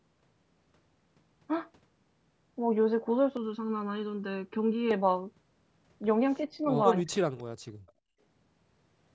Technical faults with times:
3.37-4.91 channel delay (comb filtering)
6.39-6.66 speech suppressed in double talk
7.01-7.19 speech suppressed in double talk
7.38-7.43 echo leak
7.73-8.23 background gated by the echo canceller
7.87-7.92 echo leak

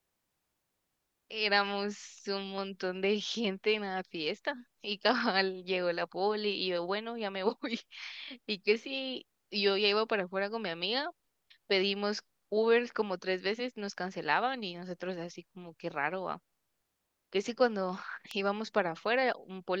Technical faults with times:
18.31 electrical switching spike

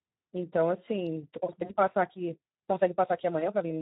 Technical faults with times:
0.00-3.81 Speex codec
1.05-3.81 time-stretched section
1.65-1.76 VoIP packet loss concealed by the speech codec
3.39-3.45 VoIP packet loss concealed by the speech codec

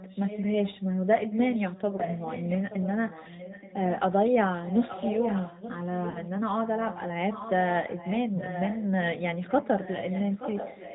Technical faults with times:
0.00-10.94 AMR narrowband mobile codec
0.00-0.82 echo leak
1.19-3.99 echo leak
1.96-2.01 lost AMR speech frames
4.65-6.30 echo leak
6.10-6.20 lost AMR speech frames
7.89-10.94 echo leak
9.84-9.89 lost AMR speech frames

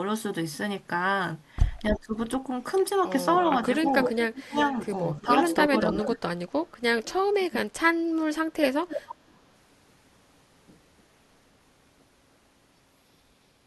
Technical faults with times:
1.90-2.13 speech suppressed in double talk
1.95-1.99 echo leak
3.39-7.13 echo leak
4.09-6.22 speech suppressed in double talk
7.29-7.56 speech suppressed in double talk
8.88-9.34 echo leak

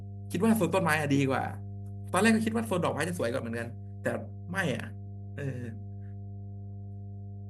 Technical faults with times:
0.00-7.49 mains hum

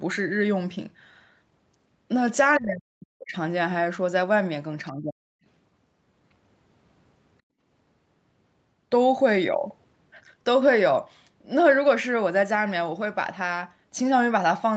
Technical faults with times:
2.58-3.35 speech suppressed in double talk
4.92-5.43 speech suppressed in double talk
7.42-7.60 background gated by the echo canceller

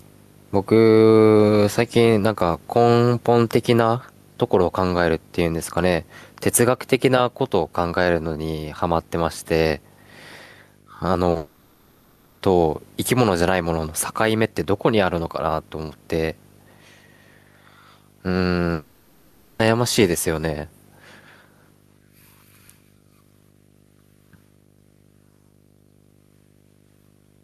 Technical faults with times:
0.00-27.43 video or display buzz
0.00-27.43 gain pumping
11.31-11.37 short concealed packet loss
11.37-12.43 long network dropout
18.73-19.61 long network dropout

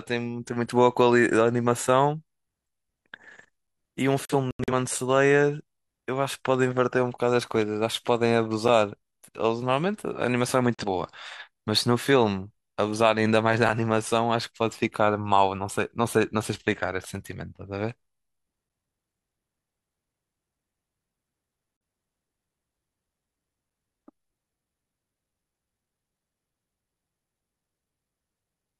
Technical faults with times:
4.25-4.73 digital broadcast dropout
8.68 gap between chunks
10.74-10.84 digital broadcast dropout
13.68 gap between chunks
21.77-21.81 digital broadcast dropout

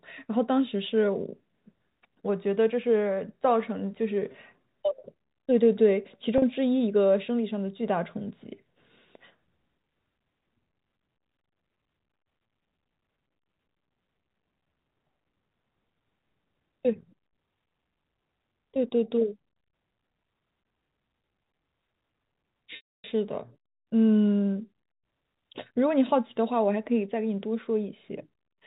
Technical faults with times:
4.32-4.34 packet loss with pitch repetition
6.38-6.42 packet loss with pitch repetition
22.76-23.04 packet loss with pitch repetition

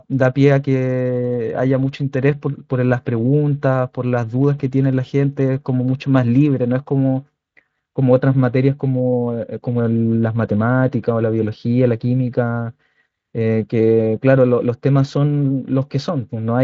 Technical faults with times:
none

